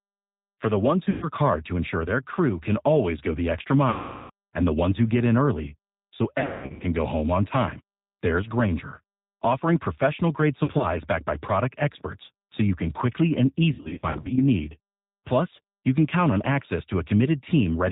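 G.729 coding runs through the whole recording at 8 kbit/s, rebuilding the speech from a vocal tract model, a pitch predictor and a few pulses per frame. Nothing above 4 kHz survives, and the voice is plainly rough and synthetic.

VoIP packet loss concealed by the speech codec occurs at 1.10–1.27 s, between "the ones" and "hard to ensure their", with 120 ms lost. It recurs at 3.90–4.31 s after "always go the extra", with 400 ms lost, and at 6.40–6.84 s, with 340 ms lost. Smaller losses follow at 10.64–10.85 s, between "offering professional grade" and "backed by product experts", and at 13.73–14.39 s. Each gap fits 20 ms packets going missing. The decoder stretches its last pitch and filter into a fading buzzy tone or coloured noise, and the voice stays weak for a moment after packets resume.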